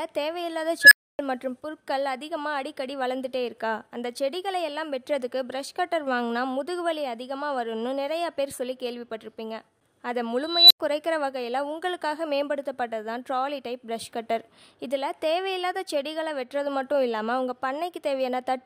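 At 0.82 s a tone around 1.5 kHz rises to a harsh, clipped squeal in about 96 ms, then the sound drops out for about 0.28 s until 1.19 s. At 10.44 s a higher tone near 4 kHz swells more slowly, over about 266 ms, and then cuts to silence for about 93 ms, ending at 10.80 s. Both are an unstable filter: a recursive filter whose coefficients let its output grow until it clipped and overflowed, muting until it reset.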